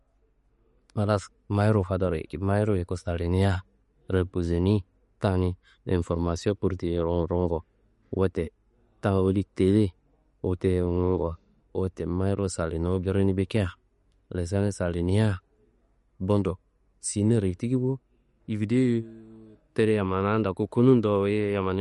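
Throughout the speech, the treble stops dead at 11.2 kHz, and weak detail flickers in and out, giving a watery, swirly texture with chirpy sibilants, likely from MP3 compression at a low bitrate around 48 kbps. A spectrogram would show a hard ceiling with patchy, blinking gaps below it.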